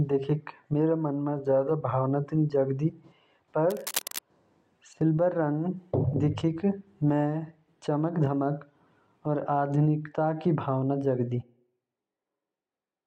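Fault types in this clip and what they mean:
cable scratch noise: Between 3.7 and 4.19 s a dense, irregular rustling sits over the speech, fairly loud, roughly 10 dB below it. This is likely a worn cable or connector being moved, its contact resistance fluctuating rapidly and injecting uneven bursts of noise.
switch to a distant microphone: Right after "भावना जागदा", at 11.44 s, the speech abruptly turns roomy and hollow, with thinner bass, about 5 dB lower level and more audible room noise, and stays that way to the end. This likely means the close microphone dropped out, leaving a farther one.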